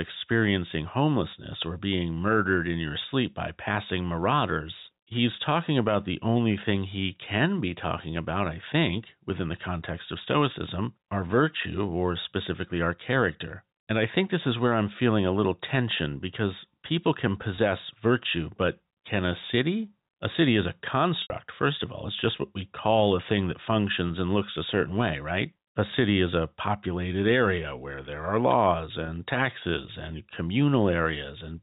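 Packet loss with pitch repetition at 17.56–17.58, 21.22–21.30, 24.08–24.10 and 29.06–29.08 s. The last pitch period is repeated to fill each gap, so the 20 ms losses sound held and buzzy, while the 80 ms loss after "city is a" fades to silence.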